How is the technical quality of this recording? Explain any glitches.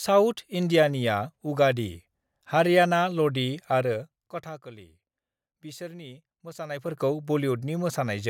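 The recording has audible zipper noise twice. From 3.77 to 4.66 s, just after "हारियाना लदि", and from 6.56 to 7.03 s, a fine ticking rides on the speech. The gain moves in 2 dB steps with no smoothing, about 15 dB down and then back up, at roughly ten and fifteen steps a second, and each step clicks.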